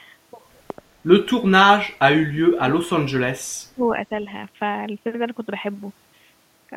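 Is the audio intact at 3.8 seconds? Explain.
No. At 3.8 seconds the speech is caught in a stretch of speech suppressed in double talk, running from 2.32 to 3.91 s. The talker's level sinks and drops out in pieces, falling as far as about 35 dB at its deepest. Roughly a second and a half is affected. The likely cause is an echo canceller meeting two people talking at once. It could not tell this talker from the returning loudspeaker echo, so it turned both down.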